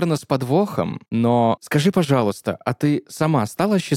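No technical faults can be heard anywhere in this speech recording.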